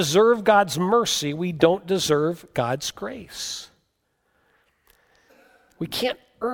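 Speech recording, no technical faults detected.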